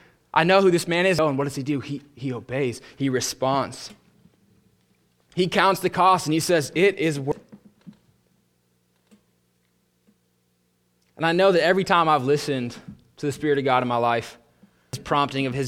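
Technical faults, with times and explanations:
1.19 s, 7.32 s and 14.93 s: damaged data in a compressed stream. Brief blips just after "who this man is" and "he says it is", and near the end. Corrupted bytes made the decoder misread frames and resync, leaving a thin broadband spectrogram streak and a waveform glitch.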